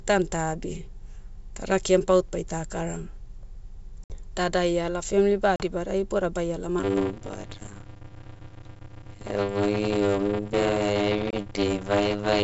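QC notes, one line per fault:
4.04 s to 4.16 s, 5.56 s to 5.64 s and 11.31 s to 11.34 s, packet loss on an ADPCM call: each event is a hard-edged hole, about 60 ms, 40 ms and 20 ms of lost audio, after which the speech comes back slightly distorted before settling. The first hole loses a handful of packets and the last only a couple. Because ADPCM sends only differences, the decoder's predictor and step size drift away from the sender's after the gap and need tens of milliseconds to resynchronise.
6.79 s to 12.43 s, block size mismatch (padded): from 6.79 s to the end, a steady 100 Hz buzz rides on the audio, which drags at about 0.53 times normal speed while keeping roughly its normal pitch. One stage writes shorter blocks than the next stage reads, and zeros fill the remainder, so a short silent gap is inserted in every block. Those gaps repeat at the block rate to form the buzz and stretch the timing. 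The ratio fits 256-sample blocks read as about 480.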